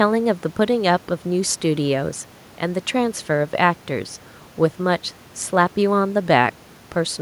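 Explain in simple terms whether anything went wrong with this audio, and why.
Nothing went wrong with this recording. The speech comes through steadily, with no dropouts, clicks or interruptions at any point.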